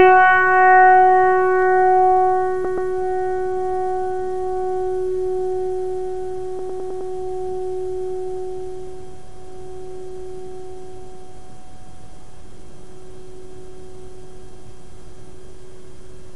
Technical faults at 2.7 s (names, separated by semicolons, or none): repeated frames